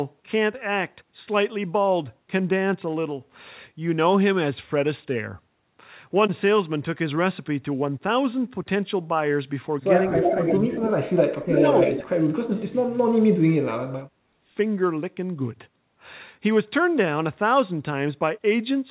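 At 10.09 s an echo leak starts and runs to 10.6 s. A copy of the speech returns about 300 ms late, roughly as loud as the original. Loudspeaker sound likely slipped past the echo canceller and was sent back.

From 10.13 to 10.48 s, speech is suppressed in double talk. The talker dips by about 10 dB. The canceller likely could not tell the talker from the echo, so it turned both down. A second dip of about 15 dB follows from 10.66 to 10.97 s.

A very faint echo scrap sits at 10.82 to 10.87 s, again about 300 ms late.

From 11.38 to 14.49 s, the talker is cut hard, down by about 40 dB, over about three seconds. Inside this stretch, echoes about as loud as the speech return at 11.56 to 11.64 s and 11.8 to 12.03 s, each about 300 ms behind.

The call path carries nothing above 4 kHz, which fits a narrowband call codec.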